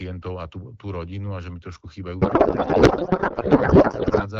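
From 2.22 s to 4.27 s the speech gives way to garbled noise and warble that barely tracks it. This is a codec payload misread. The AMR wideband frames were packed octet-aligned but unpacked as bandwidth-efficient, so the decoder found every field shifted out of place and rebuilt nonsense from valid-looking frames. Before 2.22 s the light coding texture fits AMR-WB at about 12.65 kbit/s.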